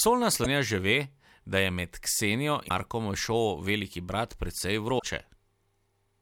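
Damaged data in a compressed stream breaks the speech at 0.41 to 0.46 s, 2.65 to 2.71 s and 4.95 to 5.03 s. Each time, corrupted bytes leave the decoder misreading frames and hunting for the next valid header, producing a brief chirp, squawk, click or short hole.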